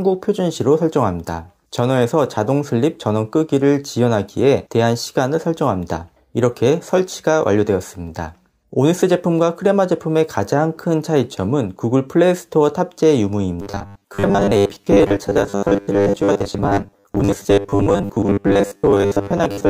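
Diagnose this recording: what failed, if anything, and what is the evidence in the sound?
At the driver or buffer stage, new audio likely arrived too seldom, so the last short block was replayed in its place. From 13.62 s to 19.70 s this produces robotic sound from repeated short buffers: a metallic 100 Hz buzz, fitting 10 ms blocks, with most real audio skipped.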